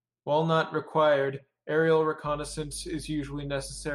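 Mains hum enters at 2.27 s and runs to the end: a steady 50 Hz tone, roughly 20 dB under the speech, from power-line coupling through a ground loop or a nearby transformer.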